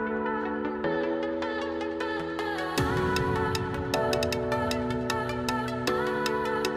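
No technical faults are audible.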